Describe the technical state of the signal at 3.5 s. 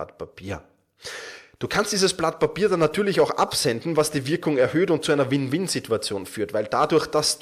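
A corrupt frame decoded from 3.47 to 3.53 s puts misplaced energy into one damaged frame, heard as a brief chirp, squeak, blip or burst of noise near -20 dBFS, visible as a short patch of energy at the wrong frequencies.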